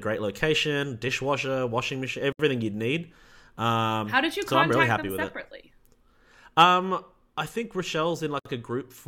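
At 2.33 s, right after "location dishwasher washing machine", the speech drops out for about 69 ms before picking up with "you'd need". That's a gap at a join of encoded pieces: each chunk was encoded on its own, and the encoder's start-up silence and last-frame padding weren't trimmed at the seam. It happens again at 8.39 s for about 60 ms, six seconds later. Both holes have smeared edges, and the audio resumes right where it stopped.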